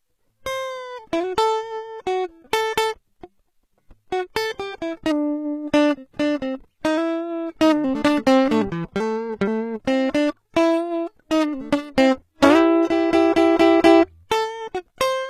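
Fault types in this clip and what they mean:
HE-AAC compression: The music sounds like it went through HE-AAC at a low rate, likely somewhere around 20 kbps. Only the lower spectrum is really coded, and the treble is rebuilt by copying lower bands upward under a rough envelope. So the top end stays bright but isn't the real thing. The damage is plainly audible, with treble that sounds synthetic and grainy, and nothing at all above about 14.9 kHz.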